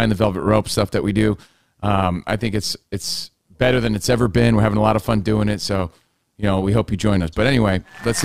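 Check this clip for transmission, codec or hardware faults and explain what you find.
One fault runs through the whole speech recording: overlap-add ripple. Frames were rejoined with overlaps that don't sum evenly, so level pulses about 6 dB around 150 times a second, a metallic, robotic buzz.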